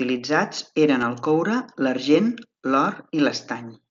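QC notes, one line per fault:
1.02 s (just before "el coure") and 2.14 s (just after "eren el coure"): concealed Bluetooth headset packet loss. Each 7.5 ms gap, consistent with one dropped frame, is refilled by repeating the best-matching recent waveform, so it is nearly hidden. On the waveform it shows as a brief repeated cycle, and on the spectrogram as a faint smeared sliver within the mSBC band below 8 kHz.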